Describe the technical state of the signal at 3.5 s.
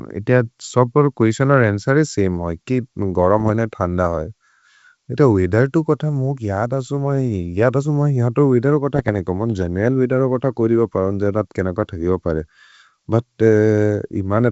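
At 3.5 s the signal is at the tail of a burst of bit errors on an ADPCM link, running from 3.38 to 3.50 s, just after "सेम् होइ कि". Flipped bits derail the decoder's step size and predictor. This leaves pops, rough grit and brief level jumps.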